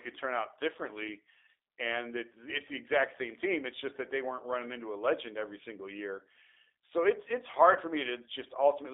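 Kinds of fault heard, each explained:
G.729 codec: The whole clip runs through an 8 kbit/s speech codec. It rebuilds the voice from a vocal tract model and a few pulses per frame. Here the speech is confined to 300 Hz to 3.6 kHz and sounds plainly rough and synthetic.
VoIP packet loss concealed by the speech codec: Just after "year so it's it's", at 7.73 to 7.78 s, 20 ms of audio is lost, which points to one dropped packet. The decoder extends its last pitch and filter at falling gain. The speech turns briefly stretched and weak.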